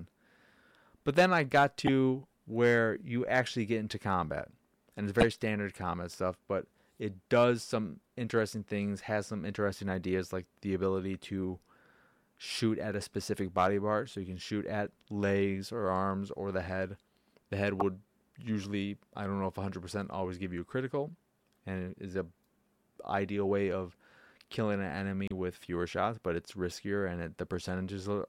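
Damaged data in a compressed stream disrupts this speech four times: 1.85 to 1.89 s, between "then I got" and "where you actually get"; 5.21 to 5.23 s, just before "standard combat stuff but"; 17.80 to 17.82 s, just before "usually I don't know"; and 25.28 to 25.32 s. Each lasts roughly 25 to 45 ms. Corrupted bytes in the encoded file make the decoder misread or reject those frames and lose sync until it finds the next valid frame header, leaving a brief burst of garbled sound or a gap.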